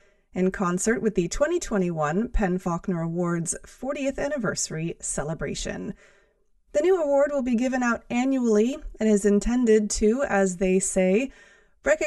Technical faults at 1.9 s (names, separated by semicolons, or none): channel delay (comb filtering)